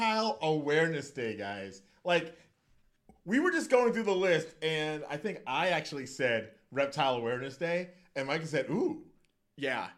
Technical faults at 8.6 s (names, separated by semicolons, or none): none